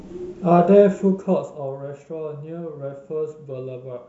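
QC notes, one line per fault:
No faults are heard in the speech. The level does rise or fall smoothly, as with a fader, but that is intended, not a fault.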